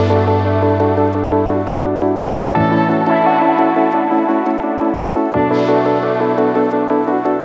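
From 1.24 to 2.54 s and again from 4.58 to 5.34 s, the sound is chopped by the voice detector, most likely because the sender's gating repeatedly switched transmission off and on. About 740 ms and 280 ms respectively become comfort noise, so the sound stutters.

At 6.88 to 6.90 s and 7.40 to 7.45 s, sound is dropped by the voice detector. Single brief stretches of 20 ms and 57 ms give way to steady comfort noise.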